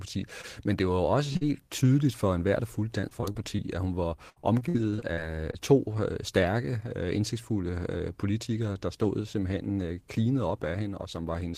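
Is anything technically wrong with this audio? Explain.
Yes. Short concealed packet loss appears at 0.41 s, 1.33 s and 1.37–1.43 s, the last between "det var jo også" and "tydeligt for enhver der". About 20 ms, 20 ms and 40 ms of audio never arrived, and the decoder extended the preceding sound to cover each hole, leaving brief smears or wobbles.

Repeated packet loss (robotic sound) follows at 3.01–3.60 s, after "for enhver der fulgte" and before "at hun", and at 4.30–5.55 s, after "at hun". Closely spaced holes, about 100 ms and 280 ms missing in total and up to 61 ms each, are patched in succession, giving choppy speech with pieces missing.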